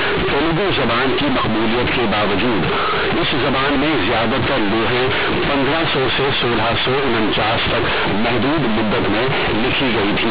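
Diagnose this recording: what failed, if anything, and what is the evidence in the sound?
Sample-format conversion failed: companded audio read as linear throughout. A-law bytes play as plain 8-bit samples without expansion, so each sign change swings half the range. Speech is loud, buzzy and hiss-filled in pauses. The waveform is bent out of shape, with quiet sounds as large as loud ones, and the spectrogram shows a broadband smear.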